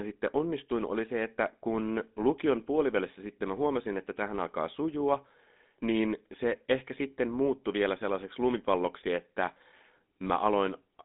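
Throughout, the speech is buzzy and gravelly, with nothing above 3.8 kHz. This is plainly audible GSM full-rate codec damage from pulse-excited vocal-tract modelling, fitting 13 kbps coding.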